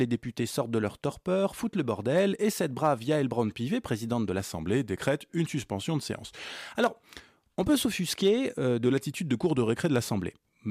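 From 4.4 to 6.5 s and again from 8.86 to 10.09 s, the speech slows by 6.1% and drops 109 cents, then snaps back. This drift correction step is likely a clock-matching resampler jumping its rate. Unlike wow, the shift is sudden and steady, not wavering.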